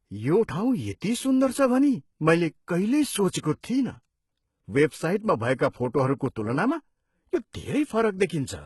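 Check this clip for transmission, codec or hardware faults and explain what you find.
The speech carries two codec faults: heavy band-replication damage across the whole clip and two short pre-echoes.

HE-AAC compression runs from start to finish. Nothing is present above 11.8 kHz, and the treble below that sounds synthetic. The likely cause is HE-AAC at a very low bitrate, consistent with roughly 16 kbps. The upper band is rebuilt by copying lower bands upward under a coarse envelope, so its harmonics fail to line up with those beneath. S sounds come out gritty and lispy. A plain low-pass or an ordinary low-rate codec would simply dull the top. This treble stays bright but sounds metallic and false.

Pre-echo occurs at 1.01 s, spreading about 14 ms, and again from 5.56 to 5.59 s, spreading about 32 ms. In each case a sharp attack sat late in a transform block. The quantisation noise, spread evenly over that block and sized for the loud onset, also filled the quiet moment just before it. 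A short hiss leads each attack, which then sounds softened and smeared. A click would be a single instant. Reverb would trail after the sound. Pre-echo arrives before it.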